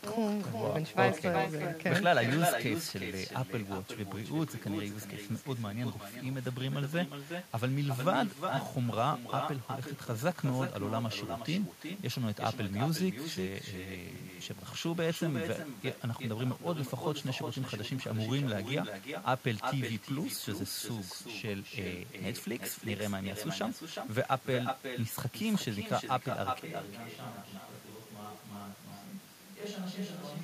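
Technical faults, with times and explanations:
Throughout, echo with no canceller: the far end is playing the call over a loudspeaker, its microphone picks that playback up, and no echo canceller strips it out, so the signal returns after a network round trip of around 0.4 s. Every phrase is trailed by a second copy at about 7 dB below the original, thinner, which gives the speech a doubled shadow.
26.60 s to the end, switch to a distant microphone: the sound changes abruptly into a hollow, roomy version with less low end, around 10 dB quieter, with room noise sitting roughly 30 dB below the speech and easier to notice at the lower level. The likely cause is that the close microphone's feed dropped out and a microphone farther from the talker took over. It does not switch back before the clip ends.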